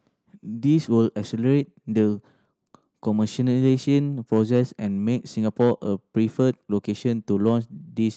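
The clip is speech, and nothing is technically wrong with it.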